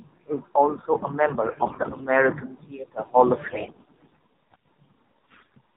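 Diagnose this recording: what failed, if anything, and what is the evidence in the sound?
The codec stage failed first. The whole clip carries the AMR narrowband mobile codec. Nothing above 4 kHz survives. The speech sounds buzzy and synthetic. That degree of damage fits a low AMR-NB mode near 7.4 kbps, where few pulses drive the vocal-tract model.

The network stage failed next, with AMR bit errors at 1.52–2.03 s after "is also a", 3.44–4.23 s and 5.32–5.54 s. Pitch and level hold, but the voice turns hoarse and gargly. Flipped low-protection bits misplace excitation pulses. The rate is roughly one bit in ten or more.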